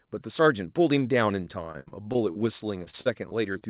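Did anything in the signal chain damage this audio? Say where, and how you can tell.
Yes: repeated packet loss (robotic sound) in the network, 1.72 to 3.63 s. Over a dozen gaps, up to 61 ms each, are filled with repeated sound, leaving choppy, robotic speech.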